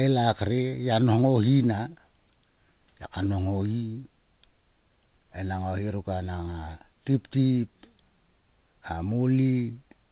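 No technical faults turn up anywhere in this speech recording. It carries the narrow band of mu-law G.711 telephone coding, with nothing audible above 4 kHz, which fits an 8 kHz sample rate.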